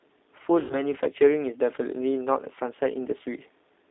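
From the first moment the speech has that narrowband, slightly rough and synthetic quality of the G.729 codec, and it's plainly audible. It fits the 8 kbit/s G.729A flavour. The line band runs from about 250 Hz up to 3.7 kHz, so there's no low body and no air on top. That's because the codec rebuilds the voice from a vocal tract filter, a pitch predictor and a handful of pulses per frame instead of sending the actual waveform.

At 0.60 s there's a stretch of VoIP packet loss concealed by the speech codec, running to 0.75 s. About 100 ms of audio went missing, which fits five lost 20 ms packets. The decoder guesses from its last pitch and filter settings and lowers the gain as it goes, so the sound smears into a buzzy tone or coloured noise that fades. Because each frame builds on the one before, the voice sounds weak and a bit off for a short while after the audio comes back at 0.75 s.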